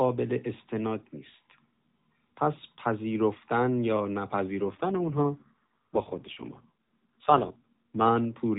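Speech over a narrowband mobile link. From 4.6 s to 8.1 s the voice turns rougher and more synthetic, with no gap or change of band. This is an AMR rate drop, fitting a fall from 12.2 to 4.75 kbps that frees bits for error protection.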